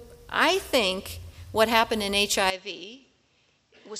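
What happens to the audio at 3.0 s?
At 3.0 s the audio is inside an input switched to a poorer device, which begins at 2.5 s and lasts to the end of the clip. The input was likely moved to a lesser microphone or a headset call profile, whose narrower pass band cuts everything above 7.8 kHz. With no gap at the switch, the sound turns abruptly duller and drops by about 10 dB, and a new background noise appears roughly 40 dB below the signal.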